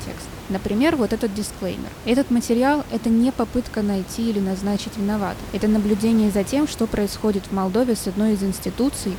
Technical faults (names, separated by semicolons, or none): none